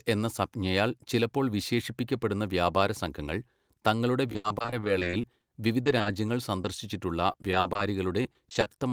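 Between 4.27 and 5.44 s the stream suffers repeated packet loss, giving a robotic sound. Packets kept arriving missing or late, and the receiver patched each hole by extending the last sound before the next one came. What sounds like about sixteen separate dropouts, the longest 80 ms, leave roughly 30% of the stretch synthesised. The speech turns choppy, with fragments missing.

Overlapping this, from 5.08 to 5.61 s, a jitter buffer slow-down sets in. The receiver's reserve ran low, so it repeated single pitch periods to rebuild it, inserting 44 ms. Playback drops to 93% speed at the same pitch, so sounds drag slightly.

Short concealed packet loss follows at 5.83–5.88, 5.98–6.02, 6.02–6.08 and 6.62–6.66 s. In each case a few hundredths of a second never reached the decoder in time, 20 to 40 ms missing. The gap was bridged by continuing the preceding sound and then blending back into the real audio. 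Each comes across as a brief smear or wobble, and the two back-to-back ones near 6.0 s form a slightly longer wobble.

Repeated packet loss returns at 7.32–7.81 s and again at 8.23–8.68 s. Each burst has about six gaps, the longest 40 ms and 20 ms respectively, and roughly a quarter of each span is concealed. The speech takes on the same choppy, robotic texture, though more lightly than the first burst.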